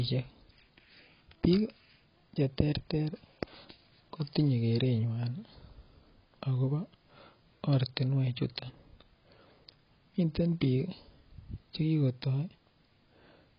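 From start to finish the speech is dull and smeared. Nothing is heard above 5.3 kHz. Sibilants turn fizzy and vowels warble. This is likely AAC compression, heavily damaged by a very low bitrate, which fits around 16 kbps, forcing a low cut-off.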